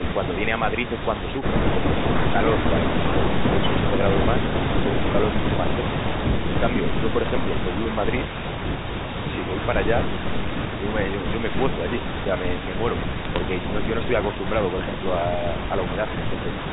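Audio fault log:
1.95–2.0 s, speech suppressed in double talk: the echo canceller likely mistook simultaneous talk from both ends for loudspeaker echo and clamped down. The sound dips by about 10 dB for roughly 50 ms, a brief dip before recovering.
13.18–13.38 s, bit errors on a digital phone line: flipped bits on the G.711 mu-law path, at a rate around 0.15 percent, corrupted individual samples. Each hit on a high bit or on the sign of a loud sample snaps out as a sharp tick, giving a short burst of crackle.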